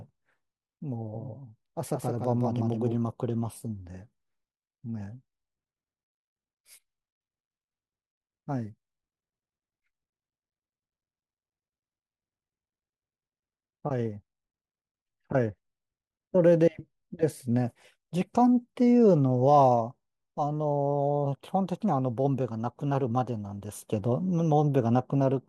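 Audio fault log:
1.15–2.95 s doubled audio track: a dry copy about 5 dB quieter trails roughly 150 ms behind, likely from a second capture path; the spectrogram shows every onset repeated, with abrupt edges.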